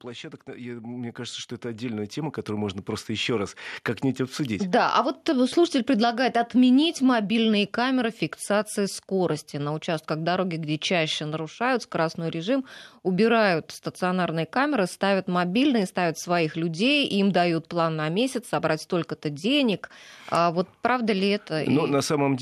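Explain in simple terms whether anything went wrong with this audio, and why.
Something did go wrong at the very start. From 0.05 to 3.62 seconds, the sound grows steadily louder. This is automatic gain rising. The recording device has a control that adjusts volume on its own. At the start it judged the input too quiet. So it turned itself up, bit by bit, over about three and a half seconds. The speech and the background noise swell together, because the control raises everything at once.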